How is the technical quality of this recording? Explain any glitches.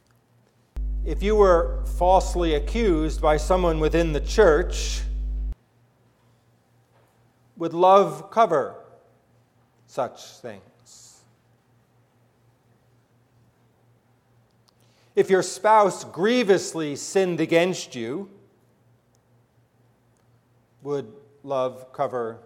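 The recording has one clear fault, mains hum. From 0.77 to 5.53 s a steady 50 Hz tone sits nearly as loud as the wanted sound, leaked in from the power line through a ground loop or nearby transformer. Unlike rumble or wind, it holds one fixed pitch with low harmonics.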